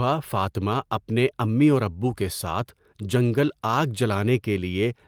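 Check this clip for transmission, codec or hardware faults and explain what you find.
No transmission, codec or hardware faults are audible anywhere in the speech.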